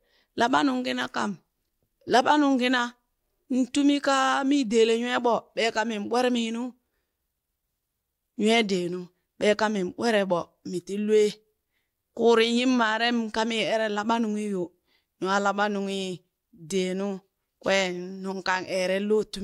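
Speech with no audible faults.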